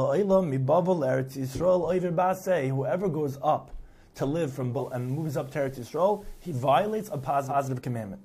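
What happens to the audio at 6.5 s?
Digital radio blending to analogue, 4.71 to 7.57 s: the receiver loses digital and cross-fades over 122 ms to FM, adding faint hiss and dropping level about 1 dB.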